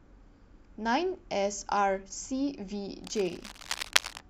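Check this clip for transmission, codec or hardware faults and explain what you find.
One hardware fault is present, in the last second of the speech.

Cable scratch noise runs from 3.04 to 4.2 s. The likely cause is a worn cable, plug or control being handled, so that its contact resistance jumps about rapidly and modulates the signal path. That leaves dense, irregular bursts of crackle sitting over the speech, heard as a rough scratching or rustling texture that is only slightly quieter than the speech itself, about 5 dB below it, and then stops.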